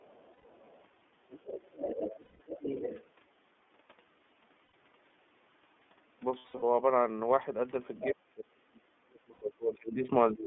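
The whole recording has passed through the iLBC codec. Each frame's excitation is coded on its own, and the line is band-limited to roughly 200 Hz to 3.5 kHz, consistent with the 13.33 kbps mode and its 30 ms frames. The codec damage is plainly audible: the speech has a narrowband, slightly rough and synthetic edge, and nothing of the upper spectrum survives.

From the start to 0.84 s, the other side's voice leaks through, very faintly at about 35 dB below the talker. The likely cause is a loudspeaker feeding the microphone with the echo canceller leaving a residue. It leaks again from 1.3 to 3.06 s, much louder at about 10 dB under the talker. A brief scrap returns at 7.97 s, about 15 dB down.

Lost iLBC frames occur at 0.33 s (120 ms), 2.21 s (180 ms), 4.65 s (90 ms), 6.38 s and 9.33 s (90 ms). At 6.38 s, 180 ms of loss is scattered across 240 ms, with the longest run around 70 ms. Each time, the decoder fills the hole by repeating the last pitch cycle blended with noise. 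That gap comes out as a held, faintly buzzy vowel, and the voice is restored almost immediately afterwards because the frames decode independently.

From 8.12 to 10.09 s, the talker's speech is suppressed in double talk. Both sides are speaking at once, and the echo canceller likely turns the whole signal down rather than separating them. The voice dips, sinking by as much as about 30 dB. The same pumping returns from 10.33 s to the end, reaching about 20 dB. The lowest bass is thinned by the call's normal microphone high-pass.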